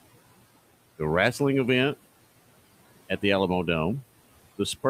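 Noise suppressor artifacts run throughout: steady background is cut by about 17 dB in gaps, pumping back under speech, unlike constant room noise.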